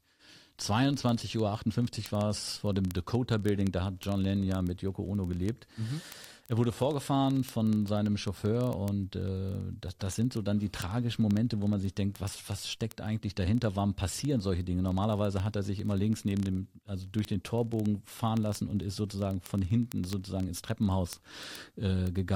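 Word clock ticks run through this speech clip from 0.12 s to 22.34 s, a steady train of sharp, uneven clicks roughly every 30 ms. The receiving device's clock drifts against the sender's by around 700 ppm, so each slip drops or repeats a single sample.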